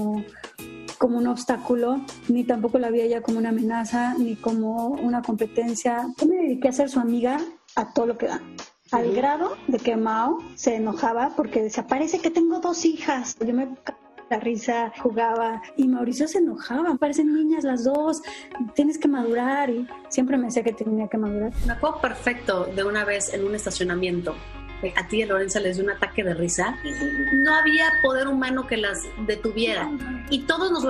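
An adaptive stream at a lower bitrate runs from 7.37 to 15.37 s. The audio abruptly loses everything above 7 kHz and codec artefacts rise, with no gap at either edge. This fits the player switching to a much leaner AAC encode, roughly 24 kbit/s in place of 96, while the connection slowed. A loudspeaker feedback squeal follows from 26.55 to 28.09 s. A single 1.8 kHz tone swells over about a second to a few decibels above the rest of the sound, because the microphone picks up its own loudspeaker and the loop gain exceeds one at that frequency.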